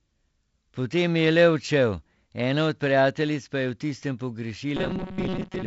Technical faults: robotic sound from repeated short buffers

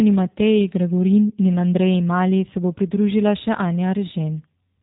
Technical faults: G.729 codec

